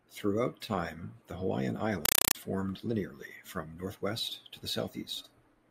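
At 2.05 s the speech gives way to a compressed stream played as audio, lasting until 2.35 s, just before "formed linearly from northwest". Encoded data reached the output as if it were plain samples and was never decoded. Each frame becomes a 4 ms burst of harsh noise followed by silence, repeating 31.25 times a second. The result is loud, chattering static in place of the speech, which points to an AC-3 stream.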